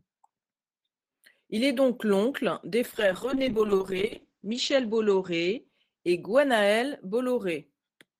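A call bitrate drop affects this speech clip from 2.86 to 7.01 s. The encoder falls from 32 to 9 kbps, coding coarsely and narrowing the audio from 20 kHz to 8 kHz, so it sounds muffled and rough.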